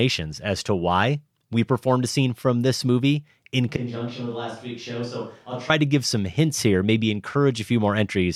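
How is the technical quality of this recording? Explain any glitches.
One clear glitch stands out in the speech. From 3.77 to 5.70 s, just after "from this movie in" and until "to give some hints", the sound abruptly turns hollow, roomy and thinner in the bass. This is likely a switch to a distant microphone after the close one dropped out. The level falls by around 10 dB, and the background noise sits only about 35 dB below the speech. On a waveform the envelope shrinks suddenly. On a spectrogram the low end weakens and a brighter noise floor fills the gaps, both snapping back at 5.70 s.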